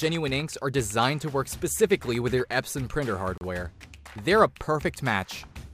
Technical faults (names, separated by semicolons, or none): Bluetooth stall